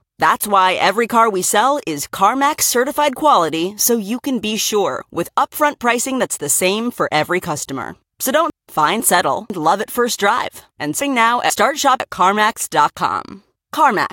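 At 8.5 s to 9.5 s, just before "love at first drive", and again at 11.0 s to 12.0 s, just after "at first drive and", the speech has chunks out of order. In each span a 500 ms chunk arrives one chunk late and plays after the half-second that should follow it, so two adjacent pieces are swapped. Nothing is missing, but the reversed order sounds jumbled, and there are three hard joins at each swap.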